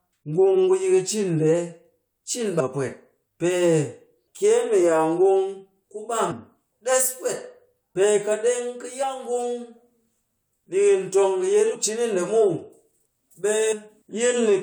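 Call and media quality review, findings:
Compressed frames skipped at 2.59, 6.31, 9.02, 11.74 and 13.71 s: speech jumps forward past roughly 300, 100, 70, 150 and 300 ms, consistent with whole 23.2 ms decoder frames dropped.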